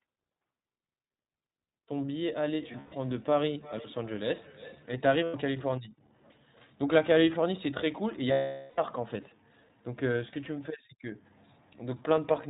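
The whole clip carries plainly audible iLBC codec damage. This narrowband codec discards everything above 4 kHz, so a spectrogram shows a hard ceiling there. Speech sounds slightly rough and synthetic, consistent with the 15.2 kbps mode coding each 20 ms frame independently.

From 2.36 to 5.05 s there is feedback echo between two devices. Another device on the same call replays this microphone's sound, which gets picked up again. Each syllable returns roughly every 300 ms at up to about 20 dB below the speech. On a spectrogram these appear as faint, evenly spaced ghost copies of each syllable.

Lost iLBC frames occur three times. Between 2.72 and 2.94 s, 140 ms goes missing in scattered pieces, the longest run about 100 ms. At 5.24 to 5.35 s, 100 ms is lost. From 8.32 to 8.80 s, 460 ms is lost. In each case the decoder repeats the last pitch cycle mixed with noise, so the sound holds as a buzzy, breathy vowel that fades during the long gap. 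The waveform shows a flat, repetitive stretch, and the spectrogram shows frozen horizontal harmonics smearing into noise. Normal speech resumes almost at once.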